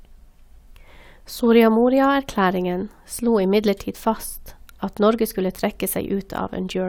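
No technical faults can be heard anywhere in the recording.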